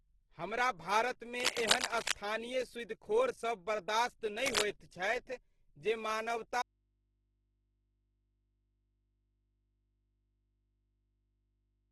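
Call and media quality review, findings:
Opus compression, full length: speech sounds rough and grainy, with noise-filled bands in place of clean tone, and nothing above 12.2 kHz. The likely cause is Opus in CELT music mode starved of bits, which fits a low rate near 12 kbps.

Cable scratch noise, 1.40–2.13 s, after "हमरा भारतमे", and 4.46–4.63 s, before "होइत छथि": dense, uneven rustling bursts roughly as loud as the speech. Likely a worn cable or connector being moved, its contact resistance fluctuating.

Audio dropout to a faint residue, 6.62 s to end: the speech cuts off abruptly mid-flow, with no fade. Only a faint mains hum remains, far below the speech level. Likely the source was lost upstream while the downstream input stayed open and picked up hum.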